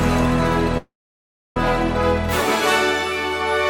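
At 0.77 s the sound stalls in a call audio freeze lasting until 1.57 s: a brief buzzy or hissy continuation of the last sound fades to silence for about 660 ms, most likely because delayed packets drained the jitter buffer. Unlike a dropout, nothing is lost. The audio resumes exactly where it stopped, just 785 ms late.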